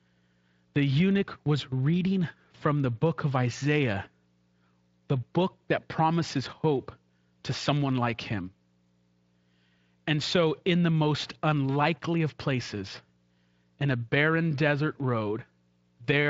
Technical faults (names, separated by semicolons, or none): none